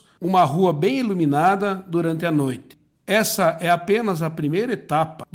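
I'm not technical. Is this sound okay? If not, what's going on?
Yes, no faults are audible.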